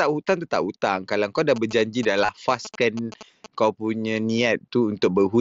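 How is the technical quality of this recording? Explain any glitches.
The recording has two glitches, one overlapping the other, heard through the wideband character of a Bluetooth mSBC headset link, with its light graininess on louder syllables.

GSM signalling bursts run from 1.56 s to 3.46 s, between "kau dah" and "kau punya". A nearby 2G phone in signalling mode emits short radio bursts that the audio circuitry rectifies. The result is a galloping pattern of short 217 Hz buzzes, roughly 15 dB below the speech.

Concealed Bluetooth headset packet loss occurs from 2.25 s to 2.29 s. Packets between headset and phone were dropped, and the receiver filled the 30 ms gap by repeating recent waveform, which fits about four lost packets. It is heard as a brief buzzy, level-held tone with a slight warble as real audio resumes.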